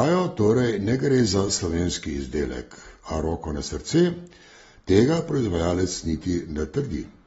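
From start to finish the speech is band-limited, with nothing above about 7.6 kHz, and it carries plainly audible codec damage: a dull, smeared top end, with fizzy, warbling texture on sibilants and sustained vowels. This points to AAC compression, most likely AAC-LC at a low bitrate around 24 kbps. With too few bits available, the encoder drops the upper band entirely and coarsely quantises what remains, leaving gaps that shift from frame to frame.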